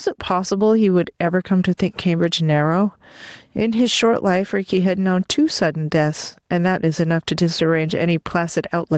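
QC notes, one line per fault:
throughout: gain pumping. The level drops away each time the speech turns loud, a swing of around 10 dB, so loud and soft syllables land close together and the speech sounds squashed and breathing. The likely cause is an input gain set far too high for the microphone, with a fast limiter or compressor pulling the level down on each loud sound and letting it recover in the gaps.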